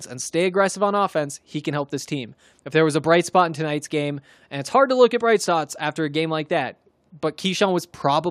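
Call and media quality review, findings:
No audible faults found in this speech recording.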